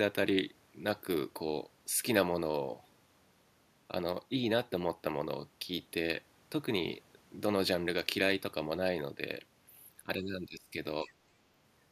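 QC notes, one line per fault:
10.03–10.75 s and 11.04–11.11 s, speech suppressed in double talk: the speech sinks sharply, by roughly 30 dB at its deepest across most of the first span, then dips again more briefly and shallowly, by around 10 dB. The likely cause is an echo canceller that could not separate this talker from the far side's loudspeaker echo while both spoke, so it turned everything down.
11.06–11.11 s, other side's voice leaking through: a faint second voice, about 30 dB below the speech, is briefly audible, overlapping the short second dip. This is likely residual loudspeaker echo that the echo canceller left in the microphone signal. It differs from room reverberation because it is a separate voice, not a decaying tail of the talker's own sound, and it arrives exactly where suppression is already acting on the speech.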